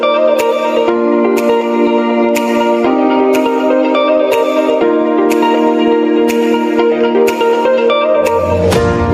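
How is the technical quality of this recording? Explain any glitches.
The recording is marred by gain pumping from start to finish. The gain swings by around 10 dB under each loud sound, leaving the whole clip squashed and flat in level. The likely cause is input gain set far too high, with a fast limiter clamping down on every peak. Unlike a noise gate, which silences the quiet gaps, this raises the gain again between loud moments.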